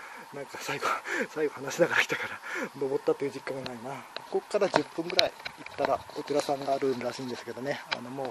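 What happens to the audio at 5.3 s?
DAB burbling strikes at 5.27 s: bit errors from weak reception slip past error correction into the MP2 data, corrupting samples and scale factors, which fits a couple of damaged frames. Short blips of noise hit single sub-bands, producing a few brief watery blips.

Underneath, MP2 compression is plainly audible. The sound is dull and gurgling, with upper bands flickering off and the remaining bands coarsely quantised into granular distortion, likely from too few bits across the 32 sub-bands, which fits roughly an 80 kbps stream.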